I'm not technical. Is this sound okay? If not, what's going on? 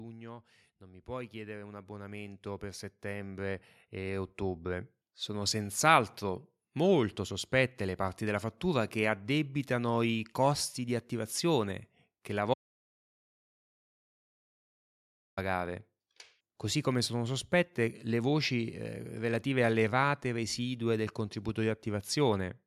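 No. From 0.79 to 5.58 s there's automatic gain rising: the recorder decided the input was too quiet and slowly turned itself up. Unlike someone simply moving closer, the voice and the background noise swell together, smoothly, over several seconds.

At 12.54 s, right after "di attivazione che la", there's an audio dropout to silence lasting about 2.8 s, until 15.37 s. It's dead, total silence, with no room sound at all, so it isn't a natural pause. Whatever was said there is lost, likely because the input briefly disconnected or was muted.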